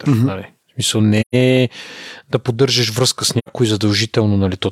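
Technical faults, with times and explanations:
1.21 to 1.35 s: AAC frame loss with muting. The speech drops into a soft-edged hole about 128 ms long, which fits three lost frames whose spectra the decoder zeroed. The overlapping transform windows fade the sound out and back in.
3.38 to 3.50 s: AAC frame loss with muting, right after "да поддържаш връзка с". A shorter gap of about 85 ms, consistent with two lost frames, is muted by the decoder. The window overlap tapers both edges, giving a brief smooth dropout rather than a hard cut.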